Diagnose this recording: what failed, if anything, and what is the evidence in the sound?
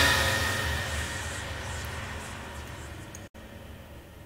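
A digital broadcast dropout runs from 3.27 s to 3.35 s. The sound fades to silence over about 8 ms, stays muted for roughly 64 ms, and then resumes further along, so that stretch of the programme is missing rather than delayed. This is a reception and transport fault, not an analogue one. The receiver lost the incoming stream or rejected corrupted frames and muted its output until valid frames arrived again. The 64 ms gap is consistent with two lost frames.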